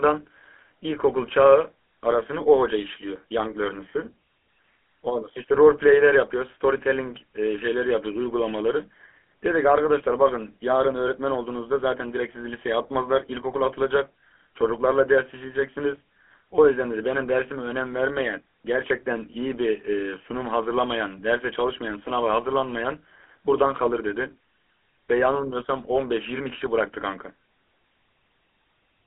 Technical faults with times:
0.00-29.06 GSM full-rate codec

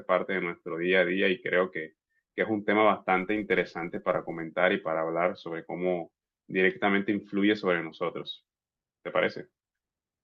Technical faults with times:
3.15-4.44 filter restarted on every block

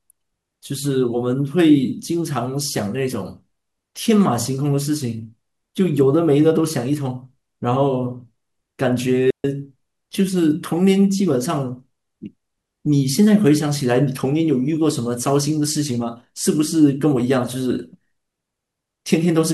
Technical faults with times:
9.30-9.44 digital wireless dropout

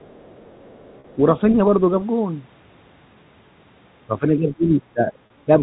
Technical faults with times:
0.00-1.15 other side's voice leaking through
1.00-1.04 packet loss with pitch repetition
4.19-5.13 speech suppressed in double talk
5.26-5.30 packet loss with pitch repetition

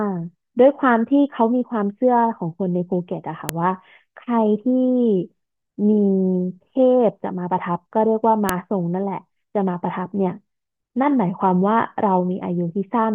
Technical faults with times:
3.49 file header played as audio
8.49 file header played as audio

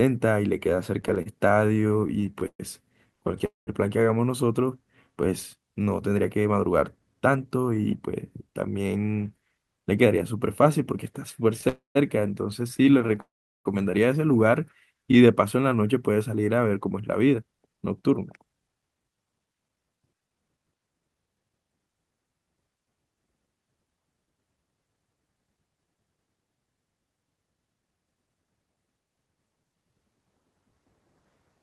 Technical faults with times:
1.01-3.42 repeated stalls (stutter)
3.46-3.69 call audio freeze
6.25-8.97 jitter buffer speed-up
11.61-15.17 scattered short gaps
11.69-11.97 call audio freeze
13.20-13.67 call audio freeze
14.98-15.76 jitter buffer slow-down
17.19-21.87 jitter buffer speed-up

